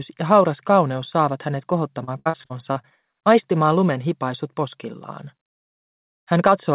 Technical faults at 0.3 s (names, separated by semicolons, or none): none